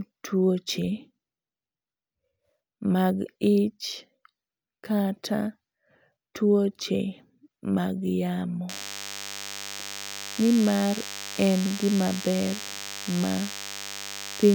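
From 8.69 s to the end of the speech, a DECT cordless phone buzz appears: radio bursts every 10 ms get rectified in the audio circuitry, producing a thin, steady 100 Hz buzz well below the voice. Its dense harmonics make it raspier than smooth mains hum.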